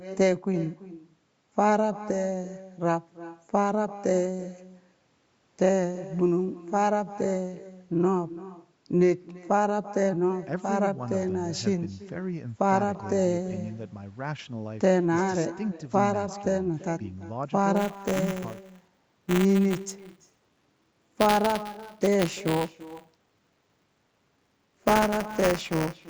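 From the start, every phrase is trailed by a faint copy about 18 dB down, roughly a third of a second late. This is echo with no canceller. The far-end loudspeaker feeds its microphone, and nothing removes it.

From 17.76 s to the end, buffer tearing adds a steady 200 Hz robotic buzz whenever speech is present. Writer and reader have slipped, so each 5 ms period splices in a small sliver of audio from one lap earlier.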